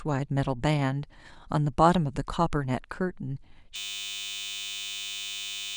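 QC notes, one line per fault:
3.76–5.77 s, system hang loop: the speech stops and a steady buzz at 100 Hz takes over until the clip ends. The same 10 ms slice replays about two hundred times, as if the output kept cycling a tiny ring buffer after the system froze, and about two seconds of audio are lost. It differs from a dropout, which leaves silence, and from a longer-buffer stutter, because each repeat is exact and too short to hear as separate chunks.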